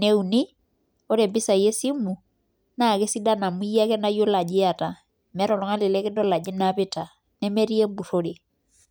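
No technical faults can be heard anywhere in the speech.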